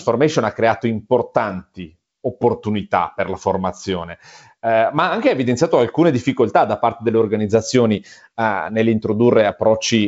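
Nothing here counts as a fault: the speech comes over G.722 wideband telephone coding at what sounds like 56 kbit/s, with the top end stopping around 7.8 kHz and just a light touch of the codec's usual character, all of which is that path doing its normal job.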